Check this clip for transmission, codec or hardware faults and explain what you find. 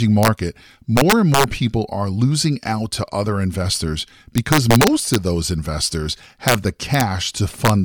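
The speech has integer overflow on its loud peaks. It occurs at 0.23–0.28 s, at 0.97–1.44 s before "people are losing out", at 4.38–5.15 s between "out to other investors" and "of those investors", and at 6.48–6.55 s, 6.94–7.01 s and 7.65–7.70 s. Peaks ran about 1 to 5 dB past the integer ceiling. They wrapped to the opposite sign instead of being limited. Each sample jumps across the full range, so you hear violent cracks. They are much harsher than clipping and longest in the 4.38 s stretch.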